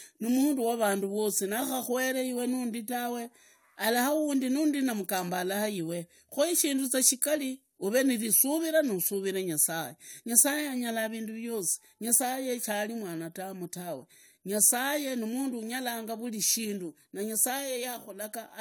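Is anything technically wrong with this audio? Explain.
No, nothing technically wrong can be heard here.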